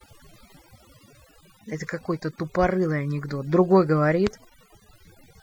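From start to finish the speech carries overdone noise removal: the denoiser was pushed too hard, so bands sitting near its noise estimate get gated out, quieter voice detail included. The pauses collapse into near silence with twinkly specks.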